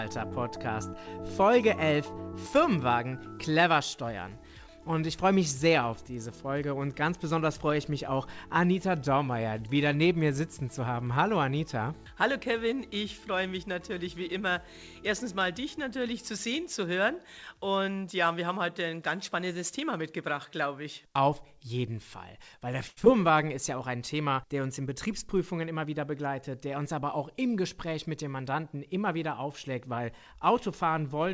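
At 22.88 s the sound freezes and drags out for 88 ms with a faint buzzy sameness before resuming at 22.99 s. This is a short stall from a late packet: the jitter buffer ran dry, so the receiver stretched the last sound until the packet turned up, losing nothing but adding 88 ms of delay.

Moments later, from 23.05 to 23.08 s, a brief smear or wobble replaces the sound. This is short concealed packet loss: about 40 ms never arrived in time, and the receiver papered over it with 9 ms of extended sound, pulling the delay back by roughly 30 ms.

Between 25.24 and 25.99 s the audio sounds slightly hurried, running at 107% speed with its pitch unchanged. This is a jitter buffer speed-up: with more audio queued than it wanted, the receiver trimmed about 50 ms in small pitch-period slices to reduce delay. Throughout, nothing sounds above 8 kHz, consistent with a G.722 call path.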